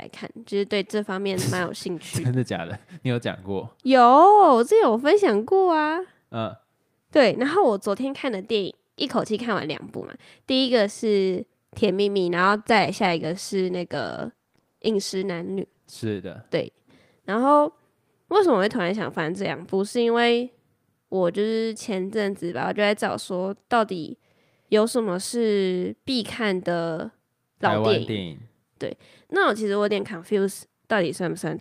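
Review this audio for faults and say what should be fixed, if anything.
A call bitrate drop runs from 12.31 to 16.17 s. The sound turns coarser and duller for nearly 4 s, which fits the encoder falling from about 48 to about 18 kbps after the bandwidth estimate collapsed, before recovering. Prevent it by setting a higher minimum encoder bitrate and smoothing bandwidth-estimate reactions to brief congestion.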